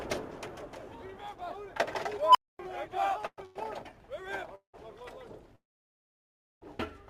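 At 2.22 s an unstable filter kicks in. A tone around 1 kHz swells over about 133 ms and clips. Then the filter's numbers overflow and everything drops out for roughly 244 ms until it resets, ending near 2.59 s.

From 3.27 to 3.40 s there's a call audio freeze. The last sound carries on as a fading buzz for 110 ms, including about 40 ms of near-silence. Then playback resumes exactly where it stopped, with nothing lost, just a gap pushed in. Likely cause: delayed packets draining the jitter buffer.

Right after, at 3.46 to 3.57 s, there's a short stall from a late packet. The receiver had nothing due, so it stretched the previous sound for 96 ms and then picked up in the same place. It comes across as a held, slightly buzzy smear.

Two more freezes follow the same pattern. At 4.55 to 4.76 s there's 184 ms of fill, about 90 ms of it silent. At 5.56 to 6.63 s a big one runs just over a second, with around 990 ms of silence before the audio carries on, nothing missing.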